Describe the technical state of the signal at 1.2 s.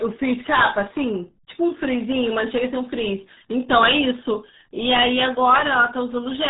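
At 1.2 s the speech carries RealAudio 14.4 codec damage, present across the whole clip. It is heavy. Nothing passes above about 3.8 kHz, which fits a coarse 8 kbit/s dial-up speech coder. The voice sounds muffled and gargly, with a smeared, bubbling texture.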